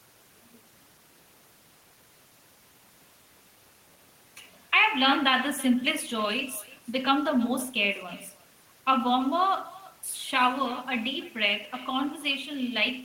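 Throughout the speech, an echo with no canceller trails each phrase by roughly a third of a second, about 20 dB down: the far end's loudspeaker feeds its microphone uncorrected. A waveform shows faint delayed copies after each burst; a spectrogram, duplicated ghost harmonics.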